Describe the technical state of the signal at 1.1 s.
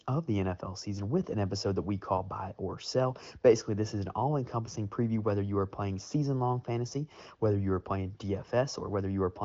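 At 1.1 s the audio is intact, with the speech carried cleanly through an AMR wideband (HD Voice) connection whose band stops at about 7.4 kHz.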